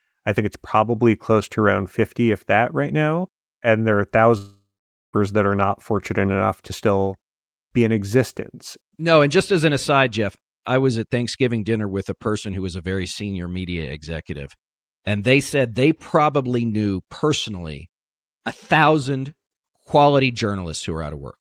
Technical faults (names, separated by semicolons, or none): long network dropout